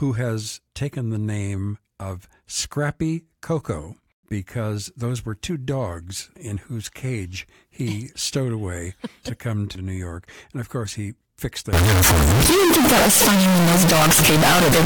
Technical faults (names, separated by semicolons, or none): float read as integer